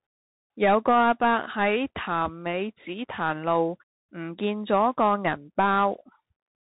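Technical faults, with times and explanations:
Throughout, Bluetooth CVSD headset codec: the speech is band-limited to below 4 kHz and coded one bit per step, up or down, which fits a 64 kbit/s link. The adaptive step lags fast changes, leaving plainly audible granular hiss and scratchy s sounds.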